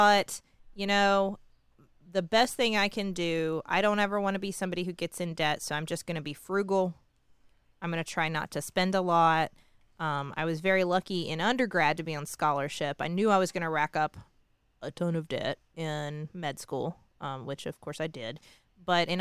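No technical faults can be heard anywhere in this speech recording.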